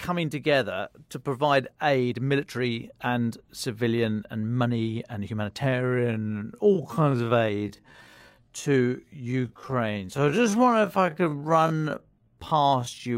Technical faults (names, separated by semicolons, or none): time-stretched section